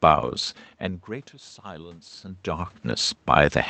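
From 1.63 s to 2.8 s the automatic gain control rises in response to a steep drop in input level, about 22 dB, which coincides with the talker moving away from the microphone near 2 s. Judging the signal too quiet, it lifts its gain gradually, by about 4 dB over more than a second. The speech and the room noise behind it swell together, so the background creeps up along with the voice instead of holding steady.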